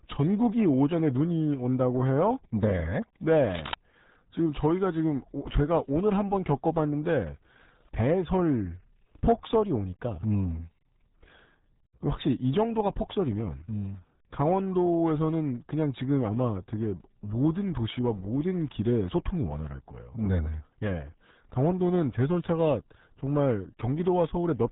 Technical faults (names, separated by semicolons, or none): RealAudio 14.4 codec; cable scratch noise